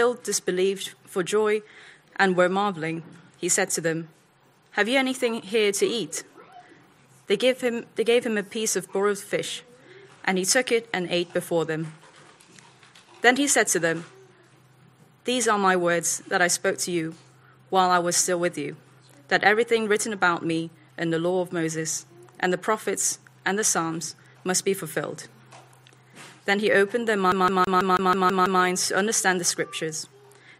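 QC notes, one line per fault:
27.32–28.62 s, CD stuck on one turn: a fast, even stutter where the same 0.16 s slice of sound repeats eight times, each pass cut by a brief mute as the laser jumps back one track at a scratch.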